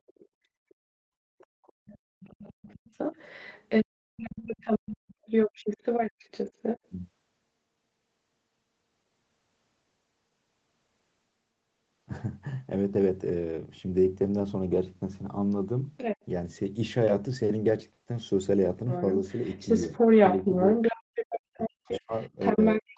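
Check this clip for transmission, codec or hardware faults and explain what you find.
There are real faults here, all from the echo canceller on the talker's end. The audio also tops out at 8 kHz, which is typical of an Opus call at a fairly low bitrate.

Other side's voice leaking through: A second voice sits under the talker from 0.07 to 0.75 s, faint and far below the main speech. It comes back from 1.38 to 6.89 s, roughly as loud as the talker, then briefly from 15.97 to 16.25 s, slightly quieter. From 18.89 s to the end at 22.97 s it's a bit louder than the talker. What you're most likely hearing is the far end playing out of a loudspeaker and getting back into the mic, with the echo canceller failing to remove it.

Background gated by the echo canceller: The room tone drops out sharply from 0.68 to 0.99 s and again from 1.73 to 2.2 s, sinking by about 32 dB and 33 dB. Each dip lasts a fraction of a second before the ambience snaps back. 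This is the canceller slamming the mic gain down while the loudspeaker is active, then releasing it, so the background seems to switch off and on.

Speech suppressed in double talk: From 20.39 s to the end, while the leaked voice is still running, the talker's own speech gets pushed down hard, by around 40 dB at its worst. Both sides are likely talking at once there. The canceller probably can't separate the talker from the echo, so it turns the whole signal down, taking the wanted speech with it.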